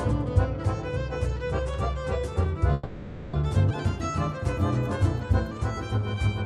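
At 2.73 s the audio stops advancing and the last sound is drawn out as a fading buzz or hiss that never quite drops to silence, then resumes at 3.35 s exactly where it left off. This is a call audio freeze, likely from packets held up in transit so the jitter buffer ran dry. The receiver filled the 600 ms wait with that continuation, adding delay without losing any audio. Shortly after, from 3.69 to 3.72 s, playback jumps abruptly forward with only a tiny joining gap, and roughly a fifth of a second of audio is gone. This skip ahead happens because a chunk was discarded, in transit or by an overfull jitter buffer, while later audio was already queued, so the two sides are spliced almost directly. From 5.03 to 6.15 s the sound drags slightly, running at about 95% speed with unchanged pitch and stretched-out sounds. This jitter buffer slow-down comes from the receiver repeating single pitch periods to rebuild its reserve, adding about 63 ms over that stretch.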